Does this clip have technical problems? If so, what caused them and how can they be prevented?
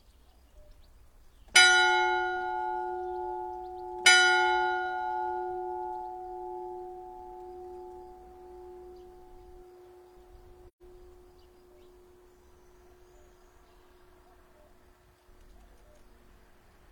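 Yes. From 10.68 to 10.82 s there is an AAC frame loss with muting: the sound fades to silence and back for about 0.13 s, which fits three consecutive lost frames whose spectrum the decoder set to zero. The overlapping transform windows smear the edges into short fades, so the hole is soft-edged, unlike a hard sample-level dropout, which cuts abruptly and clicks. Preventing it means protecting the stream with retransmission, forward error correction or a deeper jitter buffer, or using a decoder with packet-loss concealment.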